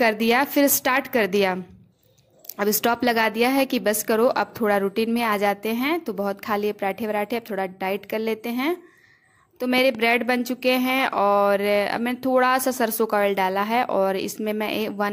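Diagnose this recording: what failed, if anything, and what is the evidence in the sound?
A loud pop, heard as two sharp pops in quick succession between 9.78 and 9.97 s. They stand a few decibels above the surrounding sound. The sound itself carries on underneath without a break. The failure sits in the analogue wiring stage. A sudden voltage step or pulse, likely from a plug, switch or static discharge, was added to the signal there. The circuits after it shaped each pulse into a brief sharp thump.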